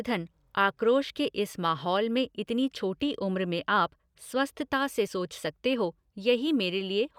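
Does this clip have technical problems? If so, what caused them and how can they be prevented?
Yes. This speech clip has compressed frames skipped at 2.77 s and 5.07 s. At each point the audio jumps forward by about 30 ms, which fits a single lost 32 ms frame that was missing from the file or rejected by the decoder as damaged. No silent gap is inserted at either join, unlike a buffer dropout. Verifying file integrity and using error-protected transport would prevent it.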